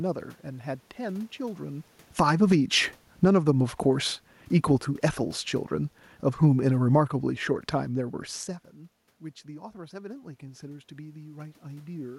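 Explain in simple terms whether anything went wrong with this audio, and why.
The recording level got pushed around by the automatic gain control. From 2.05 to 4.33 seconds, and again from 5.74 to 8.27, there's automatic gain falling: the system decided the input was too loud, or its background noise too strong, and eased its volume down over a couple of seconds, so the voice and the room noise behind it sink together.

Inside that first stretch, from 2.4 to 3.88 seconds, there's also automatic gain rising. The level gets nudged back up, and voice and background swell in step. Because this overlaps the falling one, the volume wobbles down and up instead of settling.

The talker moving around 1.5 and 8.5 seconds also changes loudness, but that's just distance from the microphone.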